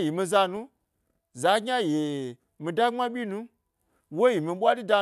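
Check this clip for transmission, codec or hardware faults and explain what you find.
One transmission fault stands out, a brief burst of DAB burbling.

At 0.56 s, just after "yimi za", weak-reception bit errors slip past error correction into the MP2 data. Wrong samples put short blips of noise into single sub-bands across 5 frames. A spectrogram shows isolated blocky bright patches in narrow bands.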